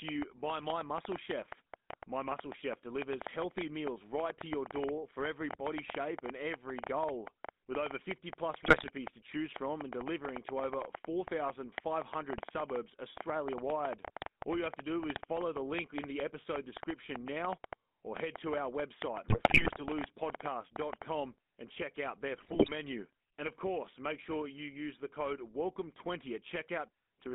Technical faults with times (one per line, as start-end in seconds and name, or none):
0.00-27.34 GSM full-rate codec
0.09-21.03 train of clicks
8.60-8.89 GSM bit errors
19.28-19.81 GSM bit errors
22.38-22.70 GSM bit errors